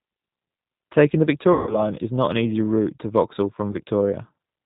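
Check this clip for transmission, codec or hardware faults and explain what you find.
Two faults are present: the whole clip carries the sound of the G.729 codec, and packet loss concealed by the speech codec occurs twice.

The G.729 codec colours the speech from start to end, and its damage is plainly audible. The character points to about 8 kbit/s. The decoder rebuilds each short frame from a vocal tract filter, a pitch predictor and a few pulses, so the speech is band-limited below 4 kHz and sounds rough and slightly synthetic. Unlike plain low-pass filtering, the roughness sits inside the voiced sound itself, not just in missing treble.

VoIP packet loss concealed by the speech codec occurs from 1.53 to 1.82 s, ending just before "is not an easy", and again from 3.72 to 3.76 s. The first gap lost about 140 ms of audio, which fits seven 20 ms packets. The second lost about 20 ms, which fits a single packet. 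The decoder extended its last pitch and filter with falling gain, so the sound stretches into a fading buzzy tone or coloured noise. It stays weak for a short time after packets resume. A plain dropout would be silent or click, not buzz.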